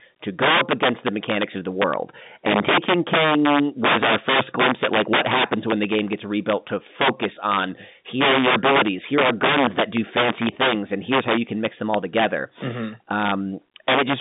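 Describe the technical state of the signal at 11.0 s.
At 11.0 s the speech carries integer overflow, present across the whole clip. The gain runs about 14 dB too hot. Peaks past the integer limit wrap to the opposite sign instead of clipping. A few percent of samples flip, giving sharp, violent cracks on loud syllables, heard through the narrow telephone band of the G.711 line.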